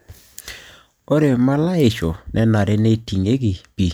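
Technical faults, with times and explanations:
No technical faults detected in the speech at any point.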